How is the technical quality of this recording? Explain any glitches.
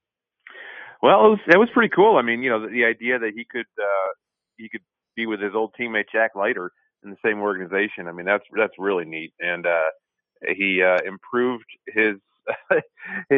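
The technical quality of this recording holds up, with no glitches to explain.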